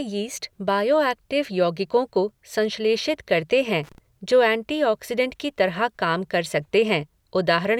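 A worn or dirty contact in the signal path made and broke rapidly from 3.84 to 3.98 s, just after "को संश्लेषित करते हैं" and before "जो ऐंटीऑक्सिडंट की तरह". This loose connector crackle chops the speech into an irregular burst of scratchy crackle lasting about 0.15 s.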